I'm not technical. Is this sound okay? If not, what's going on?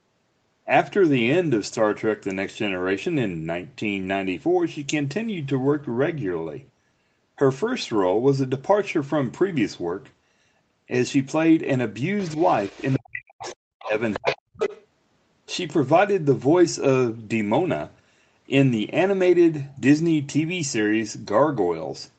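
No. Between about 12.3 and 14.8 seconds the call gets messy. Scraps of a second voice slip in under the main talker, at 12.26 to 12.96, 13.40 to 13.55, 13.79 to 13.87, 14.13 to 14.36 and 14.56 to 14.84 seconds. The first is quiet, but by 14.1 seconds that second voice is almost as loud as the talker. This is the other side's voice leaking through. Most likely the talker's device was playing the other person on its loudspeaker, the microphone picked it up, and the echo remover didn't catch all of it.

At the same moments the main talker's own speech dips or drops out. It almost disappears from 12.98 to 13.47 and again from 14.17 to 14.60 seconds, and there's a smaller, shorter dip at 13.84 to 13.95 seconds. This is speech suppressed in double talk. Both people were likely talking at once, and the echo remover, unable to tell the talker apart from the echo, turned everything down together.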